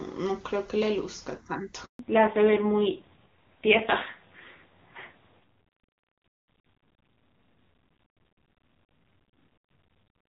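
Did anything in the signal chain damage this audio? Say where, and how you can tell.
Yes. The network stage shows a handover gap at 1.85 s. The speech dies away quickly and stays silent for 140 ms until 1.99 s, when audio resumes on a different link. That is the signature of the call being moved between networks with no speech frames delivered during the switch, so whatever was said inside that window is gone rather than concealed or repeated.

From 1.99 s to the end, the codec stage shows a fallback to narrowband. Before the handover, the HD Voice path is carrying wideband speech up to about 7 kHz, clean enough to fit a high AMR-WB rate such as 23.85 kbit/s. Afterwards, nothing remains above 4 kHz, and the speech turns duller and rougher. This points to the call renegotiating onto narrowband AMR at a low rate, around 5.9 kbit/s.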